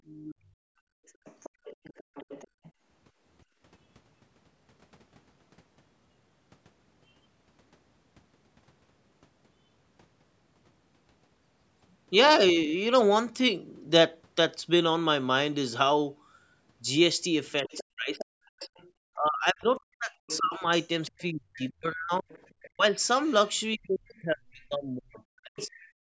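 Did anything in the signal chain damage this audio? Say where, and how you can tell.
Yes. The damage is in the call processing, specifically the echo canceller. The other side's voice is leaking through from 0.05 to 2.72 s, 17.66 to 18.9 s, 20.27 to 24.65 s and 25.57 to 25.88 s. It sits roughly 15 to 20 dB under the talker and sounds like a faint second voice behind the main one. The likely cause is loudspeaker playback reaching the microphone and surviving the canceller's subtraction.

The background is gated by the echo canceller between 0.35 and 3.61 s. The room tone drops away in bursts, adding up to around a second and a half, and falls by about 28 dB at its deepest. It comes back when the loudspeaker goes quiet. That on-off pattern shows the canceller clamping the microphone hard while it hears playback. It is acting as a suppressor, not cleanly subtracting.

Speech is suppressed in double talk from 17.63 to 22.84 s and again from 23.76 to 25.85 s. 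These stretches overlap the leakage windows. The talker's level caves in by up to around 40 dB, for roughly 3 s and 2 s of loss. Both sides are active here, so the canceller likely misreads the local talker as echo and ducks everything together. The missing content above 8 kHz throughout comes from the call's band limit.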